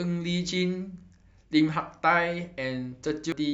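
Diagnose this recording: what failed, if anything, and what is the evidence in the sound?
Damaged data in a compressed stream, from about 3.32 to 3.42 s near the end of this speech recording. For roughly 90 ms the sound is disrupted. The fault lies at the codec and storage stage: corrupted bytes in the encoded file made the decoder misread those frames and lose sync. It then searched for the next valid frame header.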